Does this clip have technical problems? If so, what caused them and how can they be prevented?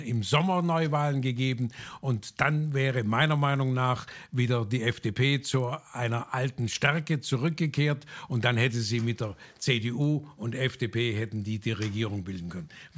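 Yes. Throughout, there's a 50 Hz buzz riding on the sound whenever there's signal, the classic sign of a resampler restarted on every block. Each 20 ms chunk was converted alone, so every block edge gets a small error, consistent with a 24 kHz to 16 kHz conversion. To prevent it, keep one resampler running across blocks so its filter history carries over.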